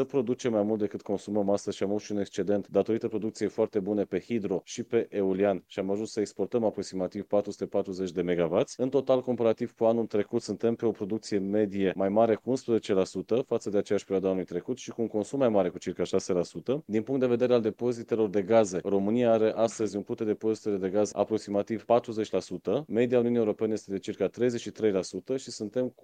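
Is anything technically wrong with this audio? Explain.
No, nothing in the signal points to a technical problem; it holds steady throughout with no dropouts, distortion or timing disturbances to be heard.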